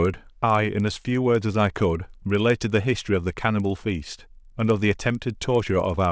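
A speech recording with a faint, steady ticking under the sound for its whole length, spaced every 50 ms to form a roughly 20 Hz buzz that appears only while there is signal and drops out in the gaps. This is the signature of a resampler restarted on every block: each 50 ms block was converted separately, here apparently from 48 kHz down to 16 kHz, so the filter lacked true neighbouring samples at every block boundary and left a small error there.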